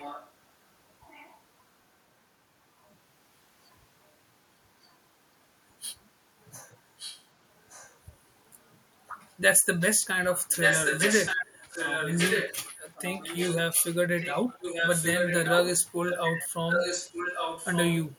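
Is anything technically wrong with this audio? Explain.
Yes. There is echo leak at 0.00–0.32 s, 1.02–1.40 s, 4.86–4.95 s, 6.98–7.24 s, 7.63–7.99 s and 10.33–18.13 s. This is likely a far-end loudspeaker whose echo canceller let part of the microphone pickup through, sending the speech back about 1.17 s late. The early scraps are short and faint, from roughly 15 dB down to barely audible. The final stretch is a long, loud copy only about 5 dB below the main speech.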